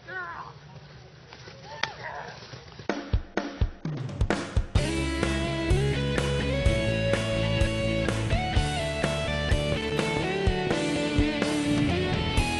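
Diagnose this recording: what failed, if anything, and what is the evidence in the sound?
The first four seconds come through dull, with nothing above about 6.6 kHz and heavier codec smearing. Then at 4.0 s the top end snaps in with no gap. That's an adaptive stream starting at a low bitrate, so the fault sits at the network and codec stage. The player grabbed a cheap rendition to start fast, which sounds like something around 24 kbit/s AAC, then stepped up to a richer one, plausibly near 96 kbit/s, once it had measured the connection.

Separately, from 9.81 to 10.04 s there's a short, irregular burst of scratchy crackle lasting roughly a quarter of a second. That's loose connector crackle in the analogue wiring: a worn or dirty contact making and breaking as it shifts, chopping the signal into fragments and throwing little pops wherever DC is present on the line. Reseat or clean the plug and that should go away.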